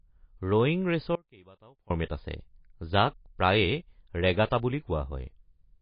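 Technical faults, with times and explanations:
Throughout: MP3 compression. Nothing is heard above about 5.1 kHz, a hard treble ceiling rather than a gentle roll-off, and the speech has a plainly audible watery, swirling quality with chirpy, metallic sibilants and smeared consonant onsets. This likely comes from an MP3 encoder starved of bits, which fits a bitrate near 24 kbps. The fixed cutoff plus weak spectral detail flickering in and out from frame to frame distinguishes it from simple low-pass filtering or noise reduction.
1.15 to 1.90 s: audio dropout to a faint residue. The speech cuts off abruptly for about 0.75 s and returns just as suddenly. Throughout the gap a faint sound remains, roughly 25 dB below the normal signal level, rather than digital silence. This points to the wanted feed likely being lost while the path after the break stayed live. The instant edges set it apart from a natural pause or a fade, and the leftover trace sets it apart from a hard mute.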